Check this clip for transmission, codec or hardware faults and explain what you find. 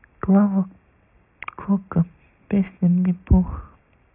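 The speech carries aliasing from start to finish. Content that had sat above 3 kHz folds back below it at wrong pitches, which fits a drop from a 16 kHz to a 6 kHz rate with no filter first. Sibilants turn gritty and metallic, with the folded energy roughly 30 dB under the speech.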